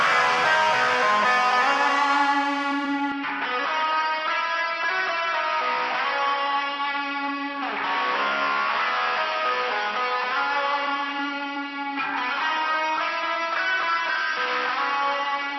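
At 3.12 s the sound abruptly turns duller and slightly quieter, with nothing above about 5.7 kHz, and new background noise appears, sitting roughly 30 dB below the signal. There is no gap at the change, and the narrowed, boxier character lasts to the end. This is likely an input switched to a poorer device mid-recording: the replacement microphone or headset path passes a narrower band and brings its own noise floor and lower level.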